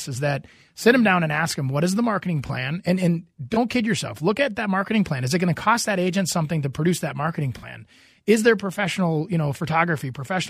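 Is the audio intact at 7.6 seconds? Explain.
No. Just after "to produce that marketing", from 7.58 to 7.65 s, the speech is briefly damaged. This is a corrupt frame concealed: the decoder detected damaged AAC data, likely about three frames, and muted or patched over it.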